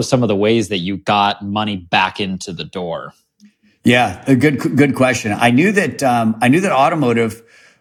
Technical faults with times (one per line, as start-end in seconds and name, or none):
none